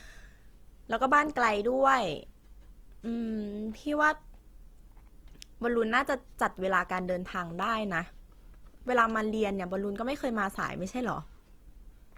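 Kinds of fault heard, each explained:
Opus compression: the speech is likely coded by Opus in its CELT music mode at a rate around 24 kbps. Starved bands are filled with folded or noise content, so voiced tones sound plainly rough and grainy, while bandwidth still extends to 20.2 kHz.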